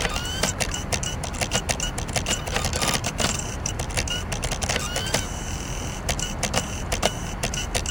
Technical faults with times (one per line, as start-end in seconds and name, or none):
2.84-2.96 repeated frames